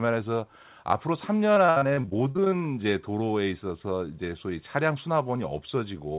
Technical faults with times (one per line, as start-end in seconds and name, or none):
1.54-2.58 repeated packet loss (robotic sound)